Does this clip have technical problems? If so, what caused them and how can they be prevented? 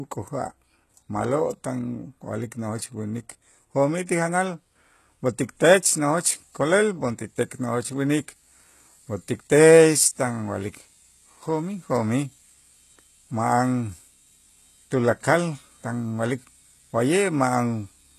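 Yes. HE-AAC compression damage runs through the whole speech clip. Nothing is present above 12.3 kHz. The treble that remains sounds synthetic. S sounds come out gritty and lispy. The likely cause is spectral band replication. The encoder kept only the lower spectrum and rebuilt the top by copying lower bands upward under a coarse envelope. The harmonics above the crossover do not line up with those below. The damage is plainly audible, which fits a very low bitrate around 16 kbps. To prevent it, encode speech with plain AAC or Opus at 48 kbps or more.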